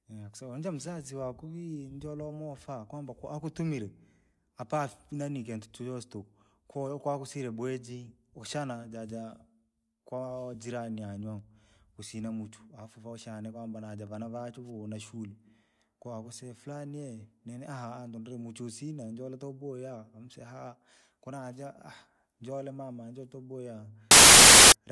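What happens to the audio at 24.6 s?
At 24.6 s there is a harsh burst of very loud white noise that cuts in abruptly at 24.11 s and stops just as sharply at 24.72 s, lasting about 0.6 s. This is file tags played as audio: an embedded cover picture, stored as compressed data, is being read as if it were samples. Compressed bytes look essentially random, so they play back as very loud static with hard edges.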